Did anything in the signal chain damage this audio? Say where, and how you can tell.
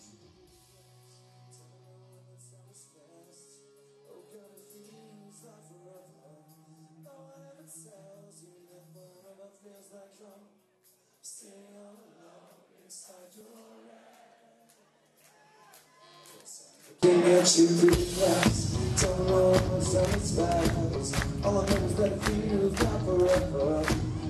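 Yes. From 0.0 to 17.03 s the mono sum is about 30 dB down. The material common to both channels nearly disappears, leaving only a faint residue of whatever differs between left and right. That points to one channel inverted, most likely a polarity swap in the analogue wiring, such as a balanced lead with hot and cold reversed on one side. Summing the two channels then cancels the shared content instead of adding it.

The codec or storage stage also lost data through compressed frames skipped, at 13.40 s and again at 20.95 s. Each time, the audio jumps forward by one frame. The frame length is 26.1 ms, which fits a 1152-sample MP3-style frame at 44.1 kHz. The frame was either missing or rejected as corrupt by the decoder. Because adjacent frames overlap, each jump is a brief smeared blip rather than a sharp click.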